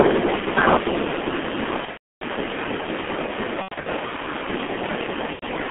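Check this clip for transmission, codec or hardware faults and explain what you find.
Three faults are present: a narrowband low-bitrate codec throughout, overload distortion near the start, and three patches of concealed packet loss.

Throughout the clip the speech sounds muffled and hoarse, with smeared consonants and nothing above about 3.4 kHz. This is the G.723.1 codec at 6.3 kbit/s, a telephone-band coder whose 30 ms frames and slowly updated voice model heavily damage fine detail.

From 0 to 0.29 s, and again from 0.67 to 0.75 s, the loudest syllables take on a harsh, crackling edge. This is likely microphone overload: peaks about 6 dB over the limit at first, then about 2 dB, had their tops flattened. A small share of samples was clipped.

From 1.85 to 2.24 s, 3.62 to 3.87 s, and 5.33 to 5.45 s, the speech turns into a fading buzzy tone or coloured noise. This is VoIP packet loss concealed by the speech codec. 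The decoder extrapolated its last pitch and filter over gaps of about 330 ms, 180 ms and 90 ms. The longest unbroken run of loss, 300 ms, comes in the first patch.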